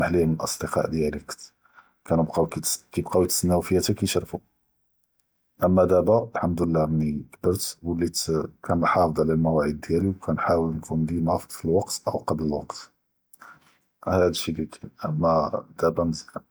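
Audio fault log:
No faults were heard in this speech recording.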